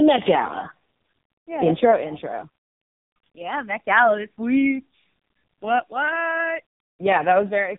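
From start to finish the speech carries heavy damage from the AMR narrowband mobile codec. Nothing above about 3.7 kHz survives, so sibilants and breath lose their edge and the voice sits in a boxed-in telephone band. The codec rebuilds each frame from a vocal-tract model driven by a handful of pulses. At this degree of starvation that leaves a buzzy, synthetic, robotic texture, which fits the lowest AMR-NB mode of about 4.75 kbps.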